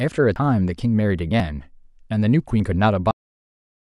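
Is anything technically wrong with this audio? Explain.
Yes. At 0.36 s and 1.4 s the speech jumps abruptly, skipping roughly 70 ms and then a brief 20 ms or so. The likely cause is a dropped buffer (overrun): samples were overwritten before being read, so the surrounding audio is spliced together without any gap.

At 3.11 s the speech stops mid-sound and falls straight to digital silence, with no natural decay. This is a cut-off end: the final buffers were never written or played out, so the recording simply ends there.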